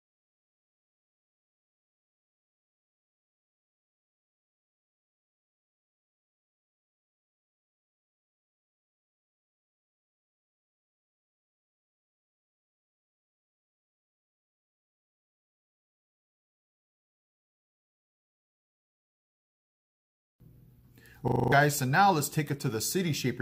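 The audio has a system hang loop from 21.28 to 21.52 s. A 40 ms slice repeats six times in a row. It cycles at 25 Hz, so it comes across as a fast, rough stutter. The computer or driver froze. The sound hardware kept replaying the same ring buffer until the system recovered. That points to a buffer of about 40 ms. Roughly a fifth of a second of real audio is lost in the gap.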